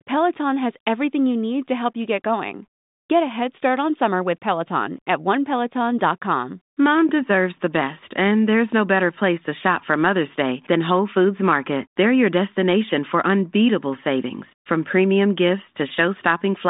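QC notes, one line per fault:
No faults found: the speech sits in a telephone band of about 150 Hz to 3.7 kHz with nothing above 3.8 kHz, consistent with G.726 ADPCM running at its top 40 kbit/s rate.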